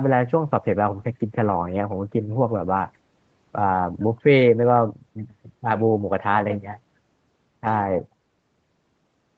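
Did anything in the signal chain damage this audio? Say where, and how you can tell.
No, nothing in the chain damaged this speech.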